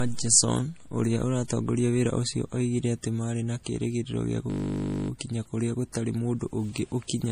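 The speech was likely encoded first as low-bitrate MP3, then re-saved at a high bitrate. This is low-bitrate audio saved at a high bitrate: nothing above 15.2 kHz, with the first encoding's artefacts still audible. From 4.5 to 5.1 s, after "marĩ na kĩĩrĩgĩrĩro gĩa", the system hung while the sound hardware replayed one 20 ms buffer. This system hang loop repeats thirty times, giving a steady 50 Hz buzz before "kũrĩa gũtarĩ mũndũ ũngĩ" resumes.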